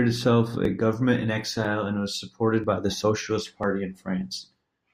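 Speech with four tiny skips at 0.65, 1.65 (just before "and was supported by"), 2.64 (between "and was supported" and "by the") and 3.63 s, the signature of audio missing between chunks. Each loses a few milliseconds and the cut edges butt together without any silence, unlike a dropout gap. Their strict one-second spacing likely points to a one-second recording or processing buffer.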